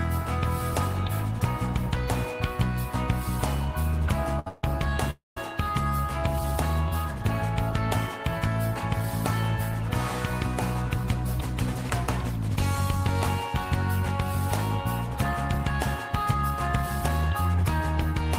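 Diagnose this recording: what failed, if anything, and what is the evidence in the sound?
A short stall from a late packet occurs at the network and jitter buffer stage at 4.39 to 4.47 s. The last sound is held for 67 ms with a slight buzz or dip, then resumes from the same point. Nothing is lost, but playback delay grows by 67 ms.

Two call audio freezes follow, at 4.48 to 4.64 s and 5.10 to 5.37 s. The first extends the sound for 149 ms as a fading buzz or hiss. The second fills 260 ms, 150 ms of it silent. Packets were likely held up in the network, draining the jitter buffer. Audio continues intact afterward.

A jitter buffer speed-up follows, as the receiver trims the accumulated delay by removing short pitch-period pieces. At 11.91 to 14.19 s the sound runs at 102% speed, shedding about 50 ms. At 15.16 to 17.50 s it runs at 108%, cutting roughly 200 ms. Pitch stays unchanged, and the second stretch sounds hurried.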